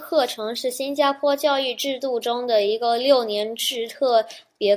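No technical faults can be heard anywhere in this speech recording, and the signal holds steady throughout.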